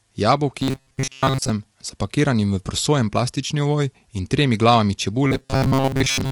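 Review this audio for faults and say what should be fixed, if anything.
Throughout, the speech sounds rough and grainy. The likely cause is low-delay AAC compression (AAC-ELD) at a low bitrate, consistent with about 32 kbps. Raising the bitrate, or switching to a codec mode with longer frames, would prevent it.

From 0.61 to 1.51 s and from 5.26 to 6.32 s, a rigid metallic buzz at 134 Hz replaces most of the sound. This is likely robotic sound from repeated short buffers: a chunk of about 7.5 ms is replayed while real audio is skipped. A larger jitter buffer that keeps audio queued ahead of playback would prevent it.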